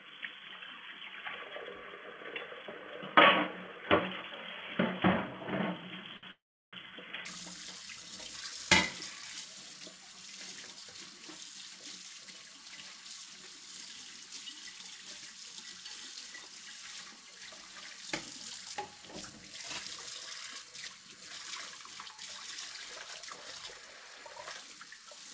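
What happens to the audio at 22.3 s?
At 22.3 s the sound passes through intact, with no dropout, glitch or distortion, only the steady G.722 call path, whose band stops at 8 kHz.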